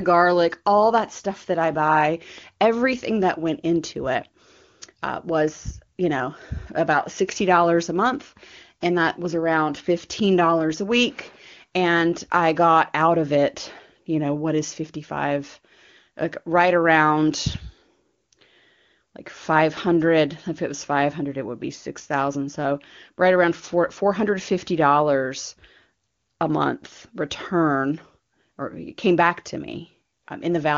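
No technical faults are audible anywhere in this speech.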